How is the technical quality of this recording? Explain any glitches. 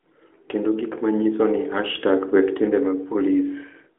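No glitches or technical faults can be heard here.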